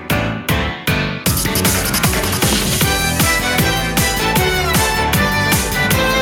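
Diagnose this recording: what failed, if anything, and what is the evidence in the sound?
Nothing in the recording stood out as a fault on listening, so there is no failed stage to point to and no evidence to cite.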